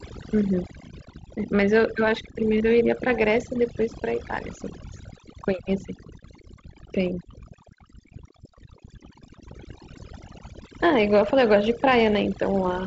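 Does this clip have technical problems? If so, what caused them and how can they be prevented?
Yes. Overdone noise removal runs throughout the speech. The reducer was set too hard, so it cuts any frequency band near its noise estimate, quiet voice detail included, leaving near-silent gaps with twinkly specks. Dial the reduction back and check by ear.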